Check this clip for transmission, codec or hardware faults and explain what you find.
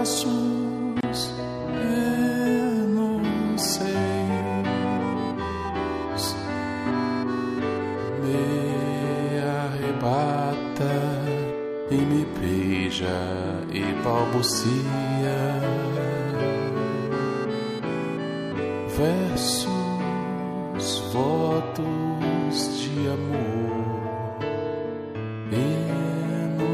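One fault turns up, early in the clip. From 1.01 to 1.03 s, a brief hole of about 26 ms cuts into continuous sound, with smeared edges, and the sound then picks up exactly where it stopped. This is a gap at a join of encoded pieces: separately encoded segments were spliced without trimming the encoder's start-up delay and final-frame padding, leaving that silence in.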